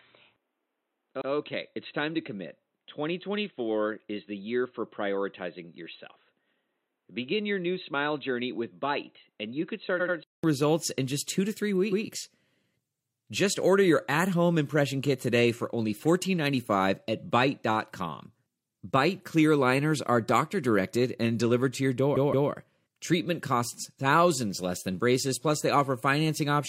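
From the start until 10.44 s the speech sounds dull and boxy, with nothing above 4 kHz, a level about 5 dB lower and a faint added noise floor; a 200 ms gap precedes the fuller sound. The likely cause is an input switched to a poorer device. Repeated frames cause stutters at 1.17 s (an 85 ms block played twice), 9.96 s (85 ms, three times), 11.88 s (128 ms, twice) and 22.12 s (171 ms, three times). Each replays a stretch of compressed audio and lengthens the clip by the repeated time.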